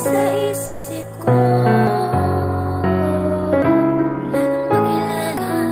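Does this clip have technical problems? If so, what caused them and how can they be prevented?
Yes, there are three kinds. From 0.65 to 0.86 s there's a call audio freeze: the sound hangs as a fading smear for about 190 ms, then picks up where it left off, so nothing is lost. It's likely that packets stalled in transit and the jitter buffer ran dry. A deeper adaptive jitter buffer or a steadier network path prevents it.

Around 1.02 to 1.05 s there's short concealed packet loss: about 40 ms never arrived, and the receiver patched only a sliver of it with an extrapolated continuation, so you hear a quick smear and the timeline jumps slightly ahead. Better network QoS or forward error correction would help.

Then there's audio missing between chunks at 1.87, 3.62 and 5.37 s, each a hard splice dropping roughly 0.3 s with no silence. The regular spacing likely comes from a recorder losing audio while switching between 2 s chunks. 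Double-buffering so capture overlaps the handoff fixes it.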